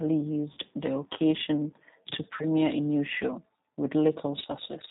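The whole clip runs through a G.729 codec, and the damage is plainly audible: speech sounds rough and slightly synthetic, with nothing above 4 kHz, which fits an 8 kbit/s G.729A stream. At 0.53 s and again at 2.37 s there's VoIP packet loss concealed by the speech codec. The decoder stretches its last frame into a fading buzzy tone or coloured noise for roughly 70 and 80 ms, consistent with about 40 ms and 30 ms of lost packets.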